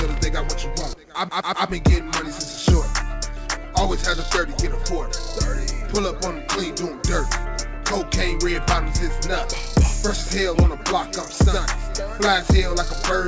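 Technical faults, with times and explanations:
There are no technical faults here, so there are no times or explanations to give.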